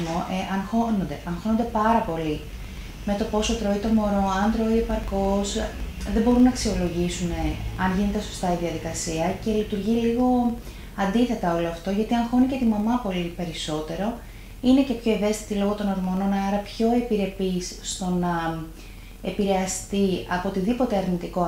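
From start to finish, a filter restarted on every block: it discards its internal state at each block boundary and begins again from silence, so every block opens with a small transient. Those transients recur at about 23.4 Hz, which fits a 2048-sample block, and they merge into a low, regular ticking buzz beneath the audio. The buzz grows louder in loud passages and fades in quiet ones.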